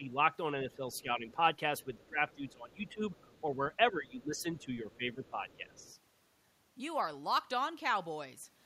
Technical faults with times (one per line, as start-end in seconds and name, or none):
0.00-0.17 speech suppressed in double talk
0.64-1.40 speech suppressed in double talk
0.74-1.02 other side's voice leaking through
1.79-2.51 other side's voice leaking through
1.84-3.03 speech suppressed in double talk
2.87-3.42 other side's voice leaking through
3.91-5.77 speech suppressed in double talk
4.20-5.94 other side's voice leaking through